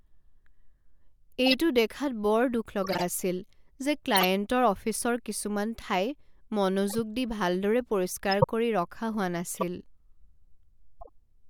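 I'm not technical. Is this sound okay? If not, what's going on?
No. Damaged chunks of compressed data were played back anyway, so the speech gets short chirps or noise bursts. This is a corrupt frame decoded, heard at 1.46, 2.84, 4.15 (right before "অফিচৰ কিছুমান ঠাই"), 6.88, 8.31 (the loudest), 9.55 and 11.0 seconds.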